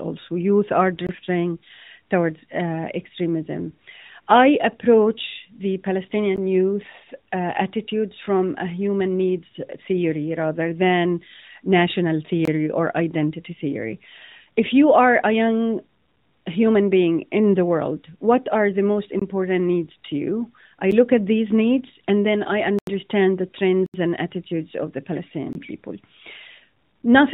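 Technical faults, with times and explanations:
1.07, 6.36, 12.45, 19.20, 20.91, 22.79, 23.86 and 25.53 s, blocks of digital silence: the sound drops to silence and returns with no fade. Four of the gaps last about 21 ms, which fits a missed 1024-sample buffer. The 6.36 and 20.91 s gaps are shorter, about 16 and 8 ms, and the 8 ms one is heard as a tick. The 22.79 s gap, after "needs and then i", runs 85 ms, and the 23.86 s gap runs 76 ms, so both are audible holes. The 19.20 s gap comes after "what are the most". Lost frames in the narrowband mobile codec would be smoothed or filled in, whereas these are hard, empty cuts.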